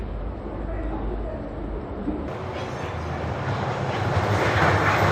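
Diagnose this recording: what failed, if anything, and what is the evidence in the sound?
Codec stage: the whole recording carries MP3 compression damage that is plainly audible. The audio sounds watery and swirly as weak frequency lines drop in and out between frames. That degree of loss fits a low bitrate of around 30 kbps, the likely cause. On a spectrogram you would see speckled, blocky holes in the quieter components.

Editing or playback stage: from 2.28 s to the end, the audio runs as a section at the wrong speed, 1.77 times faster than it was recorded. Speed and pitch rise together, so the sound turns hurried and close to ten semitones higher from that moment on. The likely cause is that this part was resampled or played against the wrong clock. A spectrogram shows every feature shifting upward and compressing in time at 2.28 s, and the waveform's events become visibly shorter and more tightly spaced.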